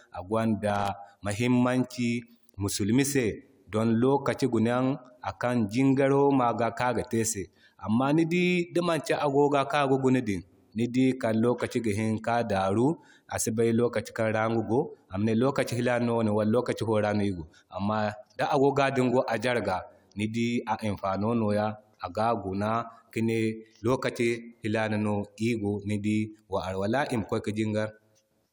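Right at the top of this speech recording, from about 0.70 to 0.88 s, there's a short burst of loose connector crackle: a worn or dirty contact making and breaking, chopping the signal into scratchy, irregular crackle for roughly a fifth of a second.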